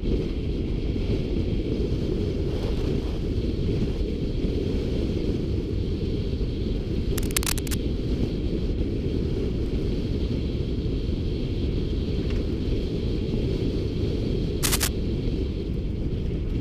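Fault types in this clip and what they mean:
Cable scratch noise: two short bursts of dense, uneven crackle sit over the sound, from 7.18 to 7.76 s a little below it and from 14.62 to 14.88 s at about the same level, likely from a worn lead or connector shifting in its contact.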